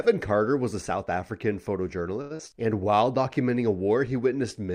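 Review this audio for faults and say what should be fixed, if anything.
Around 2.21 to 2.33 s there's a short stall from a late packet. The packet didn't show up on time, the jitter buffer ran dry, and the receiver held the last sound for about 91 ms before carrying on from the same spot. Nothing's lost, but it hangs. A slightly deeper buffer target would absorb that kind of late arrival.

Right after, from 2.37 to 2.41 s, you get a short concealed packet loss. About 60 ms of audio never arrived, so the decoder patched in roughly 26 ms of extended sound and skipped the rest, which comes across as a quick smear, and the delay drops by around 30 ms. Better network protection, like FEC or redundancy on the link, would cut down those drops.

Then from 2.84 to 3.05 s the jitter buffer slow-down kicks in. The receiver repeated small pitch-period chunks to rebuild its reserve, adding about 38 ms and running the audio at 86% speed with the pitch unchanged, so it sounds drawn out. 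Keeping the buffer from draining in the first place would stop it having to stretch like this.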